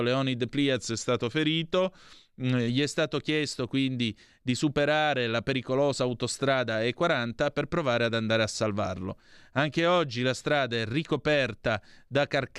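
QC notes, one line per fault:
0.76–2.68 s, drift correction step: a clock-matching stage likely cut the playback rate in a single jump to refill its buffer. For nearly two seconds the speech runs about 5.9% slow and sits 105 cents flat, a little over a semitone. Because speed and pitch drop together, the voice sounds dragged and detuned. Both return to normal just before "è stato chiesto quindi".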